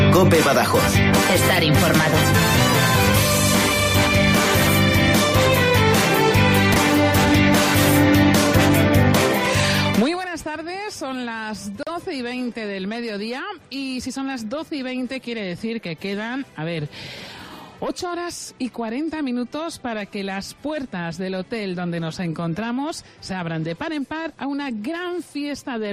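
At 6.72 s there are chunks out of order, lasting until 6.76 s. One 20 ms chunk of audio arrived late, by a single chunk, and plays after the chunk that should follow it. Nothing is missing. The order is simply wrong. That swap creates three hard joins in about 40 ms. You hear a brief jumbled flicker in the sound.

At 11.83 s there is a gap at a join of encoded pieces. The audio was encoded in separate pieces and joined without trimming. The encoder's start-up delay and the padding on the last frame both stayed in. The result is a gap of about 38 ms cut into otherwise continuous sound. Its edges are smeared by the codec, so the truly silent part is shorter. The sound then resumes exactly where it stopped.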